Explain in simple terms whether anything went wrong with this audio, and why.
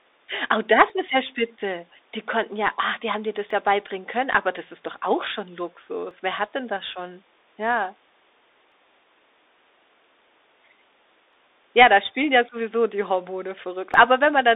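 The speech sounds muffled and thin, as though heard over an old phone, with a grainy hiss underneath and scratchy s sounds. That is the Bluetooth CVSD headset codec: it keeps nothing above about 3.8 kHz, and its coarse one-bit coding roughens sharp sounds.

A click recurs about every 2.6 seconds, from 0.90 s to about 13.9 s, roughly seven times. These are clock drift buffer slips, likely caused by two devices' clocks running slightly apart, so a tiny chunk of sound periodically gets dropped or repeated.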